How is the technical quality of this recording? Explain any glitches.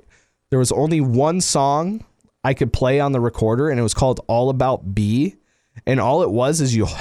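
The recording's technical quality is sound, with no glitches to explain.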